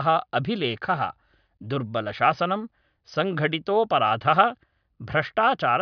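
No technical faults can be heard in the speech recording, which keeps a steady, continuous signal with no dropouts, clipping or distortion at any point.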